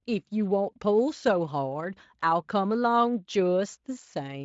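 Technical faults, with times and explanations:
No technical faults can be heard in this speech.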